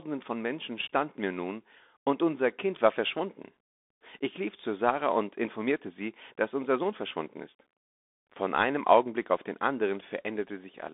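Speech heard through a Bluetooth CVSD headset codec for the whole clip: the band runs from about 250 Hz to 3.6 kHz with nothing above 3.8 kHz, consistent with a 64 kbps one-bit delta stream. Unlike a plain telephone filter, its step-size tracking is plainly audible, with gritty sibilants and granular hiss.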